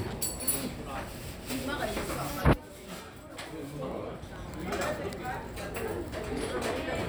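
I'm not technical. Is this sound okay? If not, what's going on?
Yes, it's fine: nothing in it sounds broken or glitchy, so there's nothing you need to worry about.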